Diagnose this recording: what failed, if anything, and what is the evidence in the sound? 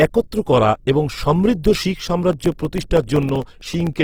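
Two separate problems here. The first sits at the codec stage and runs through the whole clip: the speech sounds grainy and rough, with a noisy, plainly gritty texture on voiced sounds rather than swirly holes, yet the top end stays open, with content reaching about 20.3 kHz. That is likely Opus compression in its CELT music mode at around 16 kbps. The band energies are kept, but the detail is filled with folded or noise content.

The second is a driver or buffer fault: periodic USB or driver dropouts. Starting at 2.33 s, just after "করা এবং সমৃদ্ধ শিখ", and running to 3.93 s, there is a regular ticking every 64 ms, around thirty ticks in all. Each tick is a tiny gap of about a millisecond that is replaced by silence. The even spacing points to a background task stalling the audio path at a fixed interval.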